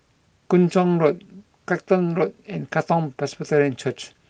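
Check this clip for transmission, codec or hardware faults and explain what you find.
The speech signal is technically sound, carrying only the ordinary coding texture of a call path with its high end rolling off around 12 kHz, which fits Opus running at about 32 kbps.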